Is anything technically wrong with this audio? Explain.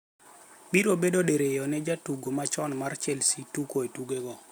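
No, nothing in this speech recording points to a technical fault. There are no interruptions, distortion or other problems anywhere in the clip.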